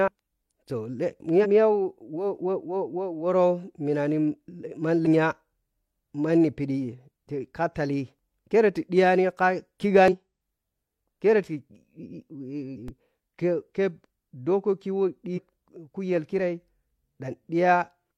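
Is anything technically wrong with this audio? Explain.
Yes. The compressed stream carrying this speech has damaged data in five places: 1.40 to 1.46 s, 5.02 to 5.08 s, 10.08 to 10.15 s, 12.73 to 12.77 s, and 15.33 to 15.39 s. At each, corrupted bytes make the decoder misread frames and lose sync until it finds the next valid frame header. The result is a brief chirp or squawk of roughly 45 to 65 ms.

A DC step follows at 12.88 s, just after the fourth corruption. The waveform's zero line suddenly jumps to a new offset, as if a converter recalibrated or an offset input was switched in. It is heard as a single low thump. The offset then bleeds away as the signal passes through a roughly 20 Hz high-pass stage, and the speech carries on unchanged in level and tone.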